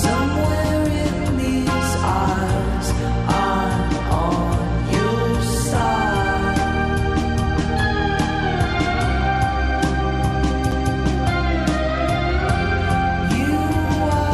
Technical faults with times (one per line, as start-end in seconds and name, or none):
10.71 CD skip